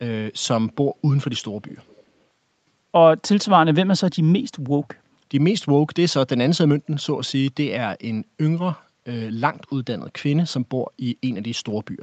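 From 1.68 to 2.04 s a faint, delayed copy of the speech trails the original by about 0.41 s, sitting far below the direct sound. This is an echo leak, likely from a far-end loudspeaker whose echo canceller let its microphone's pickup return down the call.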